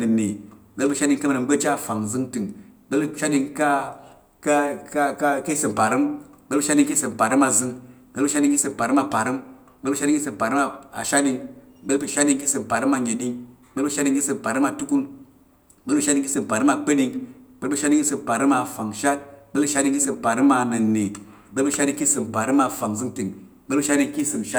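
Nothing in this speech recording stands out as a technical fault, so there's no problem to point to anywhere along the way.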